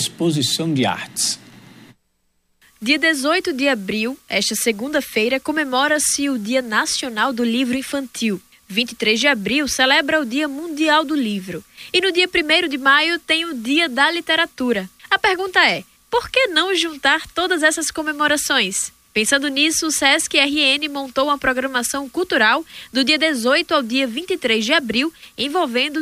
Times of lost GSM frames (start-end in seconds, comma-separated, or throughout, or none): none